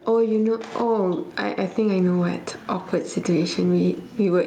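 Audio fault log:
throughout, gain pumping. The background swells in pauses and ducks under loud speech, swinging around 15 dB. Likely cause: input gain far too high, with a fast limiter clamping each peak.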